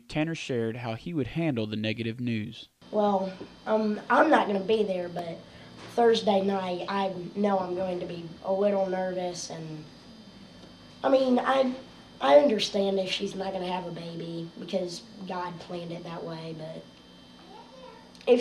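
At 5.19 s there is a block of digital silence. For about 1.45 ms the signal drops to silence and then returns, with no fade on either side. That length fits a single 64-sample buffer that was not filled in time and was sent out as zeros. Because the hole is so short, the two hard edges merge into one sharp tick rather than an audible gap in the sound.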